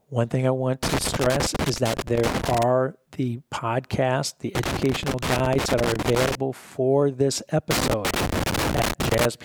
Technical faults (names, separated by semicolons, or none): loose connector crackle